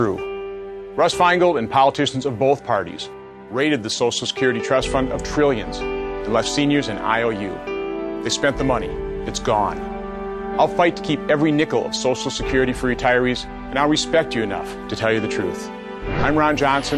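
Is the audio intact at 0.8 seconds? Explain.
Yes, the audio is intact at 0.8 seconds, with no dropout, click, distortion or other fault at that moment.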